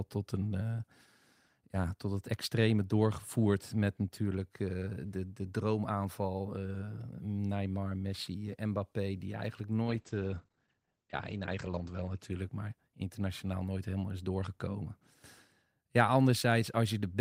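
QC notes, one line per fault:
9.83–13.18 s, call bitrate drop: after "die eigenlijk" the speech turns rough and muffled, clearing by "nooit helemaal is doorgekomen". The encoder fell from 32 to 14 kbps, bottoming out for about 2 s. Coarser coding and an 8 kHz cut-off, down from 20 kHz, dull the sound.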